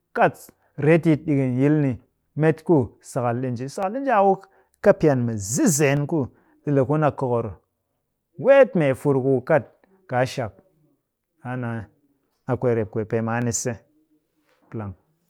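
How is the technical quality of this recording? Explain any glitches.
Six sharp clicks mark the speech at 0.63, 3.83 (just before "ɗi nji a"), 4.68, 5.97, 12.04 and 13.42 s (after "rep kwee pee maan"), likely dropped samples: a fraction of a millisecond vanishes, so the waveform steps abruptly, showing as thin vertical spectrogram lines.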